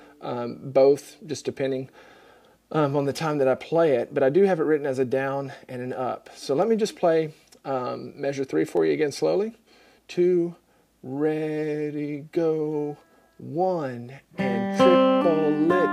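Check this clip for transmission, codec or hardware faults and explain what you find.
Two faults turn up, both of the same kind. At 6.62 s and again at 8.77 s, the stream has likely lost a fraction of a millisecond of data to dropped samples. The waveform leaps straight to a later value, and each leap is heard as a single sharp click.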